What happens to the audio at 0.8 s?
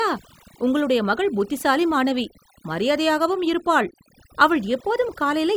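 At 0.8 s the clip is caught in overdone noise removal, which runs through the whole recording rather than starting there. A noise reduction stage set far too aggressively pushes individual frequency bands down or shuts them off whenever they sit close to its noise estimate, taking the quieter parts of the speech with them. The background drops away and breaks up into twinkling specks.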